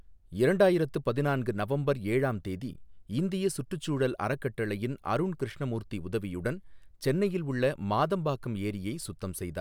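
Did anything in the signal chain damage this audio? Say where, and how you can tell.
No, nothing in this speech recording stood out as damage from any stage of the signal chain on listening.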